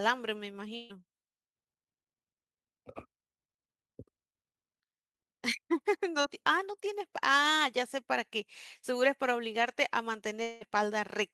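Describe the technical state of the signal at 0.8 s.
A burst of packet loss from 0.75 to 0.91 s drops about 140 ms; concealment stretches and fades the last sound into a held buzz or hiss before resuming later.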